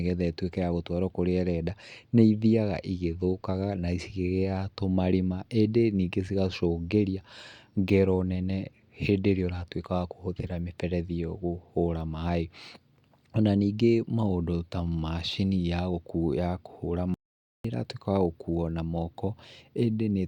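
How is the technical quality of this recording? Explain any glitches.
The recording has one clear glitch, an audio dropout to silence from 17.14 s to 17.65 s. The input signal was likely lost briefly while recording continued writing zeros, so the speech cuts out abruptly for about half a second into dead silence, with no room tone, before resuming mid-flow.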